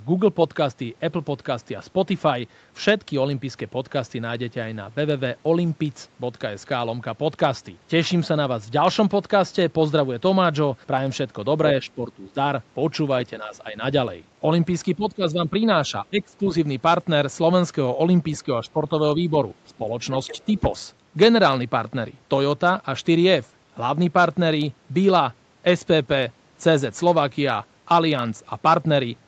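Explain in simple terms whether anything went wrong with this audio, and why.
The talker's voice dips or breaks up at 11.82–12.36, 14.96–15.55, 15.88–16.44, 18.65–18.91, 19.15–19.34 and 19.78–19.87 seconds. This is likely speech suppressed in double talk: the call's echo canceller turned everything down while both sides spoke.

At 20.27–20.6 seconds, a faint second voice slips through. That is likely the other side's voice leaking through, a leftover of the loudspeaker echo.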